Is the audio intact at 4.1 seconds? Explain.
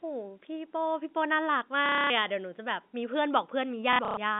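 No. Packet loss with last packet repeated runs from 3.93 to 4.17 s. About 180 ms of audio is missing, and the previous packet is replayed in its place, producing robotic stutters.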